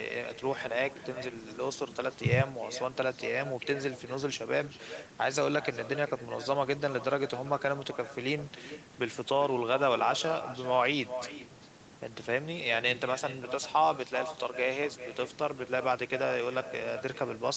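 From start to finish, the speech carries an echo with no canceller. The far end's loudspeaker feeds its microphone, and nothing removes it. Each phrase returns roughly four tenths of a second later, about 14 dB quieter and thin, with nothing above 8 kHz.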